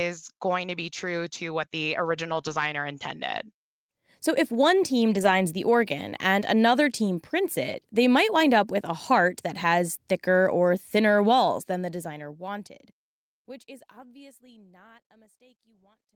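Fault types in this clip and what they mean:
lost packet rebuilt from error correction: Lost packets were replaced by the lower-bitrate backup copy carried in the following packet, so the audio never drops out but turns grainy and noisier. It happens at 2.29–2.39 s, just after "true to what the", again at 2.45–2.59 s, and at 5.11–5.33 s, between "if one team" and "the organ and another". The rebuilt stretches are about 60, 80 and 120 ms. On a spectrogram these stretches show blurrier harmonics with a hazy noise floor. The waveform stays continuous.
short concealed packet loss: At 2.41–2.45 s, about 20 ms of audio never arrived, and the decoder covered roughly 15 ms of it by extending the preceding sound before blending back into the real signal. It sits between two of the rebuilt stretches and adds a brief smear or wobble. On a spectrogram it appears as a thin patch of unnaturally steady, repeated spectral texture. 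The waveform shows a short, overly regular segment with a soft join on either side.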